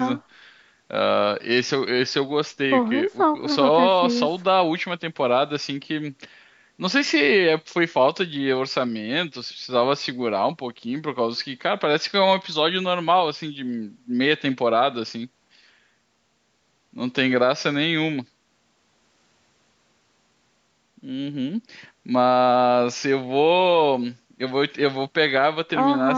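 No technical faults can be heard anywhere in the speech, which has simply passed through a call's normal microphone processing.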